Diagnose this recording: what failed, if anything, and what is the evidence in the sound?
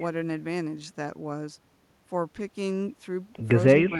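Call processing: from 3.88 s to the end, the speech dips by roughly 5 dB for about 70 ms, likely speech suppressed in double talk by the echo canceller.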